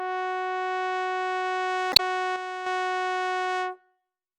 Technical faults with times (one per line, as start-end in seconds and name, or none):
1.90-2.00 damaged data in a compressed stream
2.36-2.66 one channel drops out